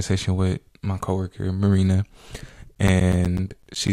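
From 2.75 s to 3.88 s the speech is broken by periodic USB or driver dropouts. Every 0.125 s something stalls the audio path and about 10 ms of sound is replaced by silence, giving around ten tiny gaps heard as a steady ticking, eight per second. What separates this from random network packet loss or scattered clicks is the strict, even spacing, and the ticks sound only where there is speech to interrupt.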